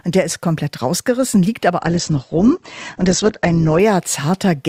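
From 1.80 s to 3.80 s the adaptive stream switched to a lower-bitrate version. The player fell back to a much leaner encoding for two seconds, and the sound fits a step down from about 64 kbit/s to about 12 kbit/s Opus. The change is abrupt, with no gap. Everything above 8.2 kHz disappears, so the top end goes dull, and codec artefacts thicken until full quality snaps back at 3.80 s.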